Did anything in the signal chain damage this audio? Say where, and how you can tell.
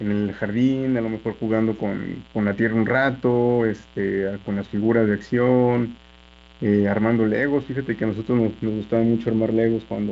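Yes, in the analogue wiring, before the signal was digitised. Sharp switching spikes, most likely from a dimmer, rectifier or an unshielded run, leaked in twice per cycle of 60 Hz mains, producing mains buzz for the whole clip. Those spikes carry harmonics of 60 Hz far up the spectrum, so instead of a soft hum there is a steady, raspy buzz roughly 25 dB under the speech. It passes intact through the wideband telephone coding, which keeps its upper harmonics.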